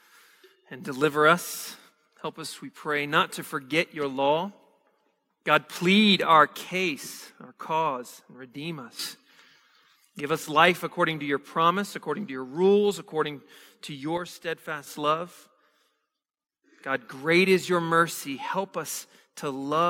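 From 8.99 to 10.20 s the speech and its background noise leap up together by about 10 dB, and from 14.17 to 14.87 s both drop by about 7 dB. These are sudden gain jumps, likely from a gain change applied between one sample and the next with no ramp.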